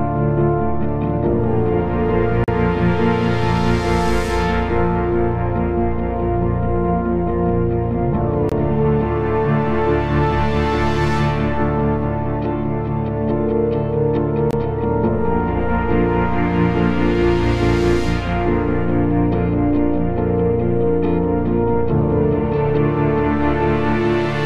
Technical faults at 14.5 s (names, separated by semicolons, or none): gap between stream segments